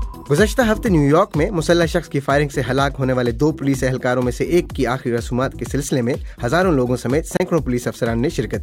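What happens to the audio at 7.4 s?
The sound cuts out for a moment between 7.37 and 7.40 s, leaving a silent gap of about 29 ms. When it returns, it picks up further along rather than where it stopped, as though it had kept playing through the hole. This is a Bluetooth dropout, likely caused by audio packets failing to reach the headphones in time. A gap of this length fits roughly two lost packets.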